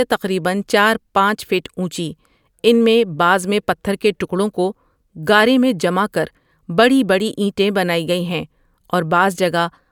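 No technical faults are audible anywhere in the speech recording.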